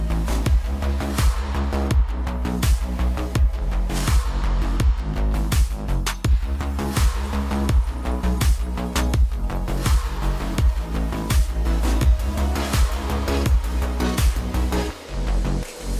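No technical faults can be heard anywhere in the clip. There is nothing in the audio that calls for a timestamp or closer attention.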